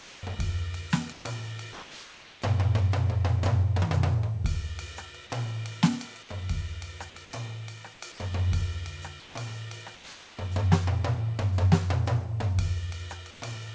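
Comfort noise in place of the background appears at 0.00–0.23, 1.13–1.25, 1.73–2.42, 9.20–9.35, 9.95–10.37 and 13.31–13.40 s. In these quiet stretches of the music, about 21 to 24 dB below the loud passages, the sender likely stopped transmitting, and the receiver filled each gap with synthetic noise. The real background gives way to a flat, featureless hiss, from the same level to about 4 dB quieter, with nothing above 8 kHz.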